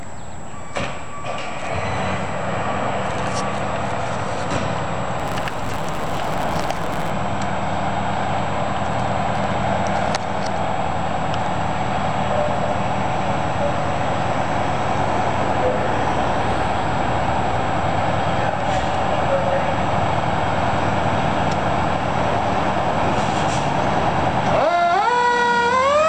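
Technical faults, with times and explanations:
5.18–7.10 s, block size mismatch (truncated): one stage hands over longer blocks than the next one takes in, and the tail of every block is dropped, which fits a 512-sample write block being read short. The regular chopping at each block boundary is heard as a buzz at about 150 Hz, and because part of every block is missing, the sound runs 1.6 times faster while keeping its timbre.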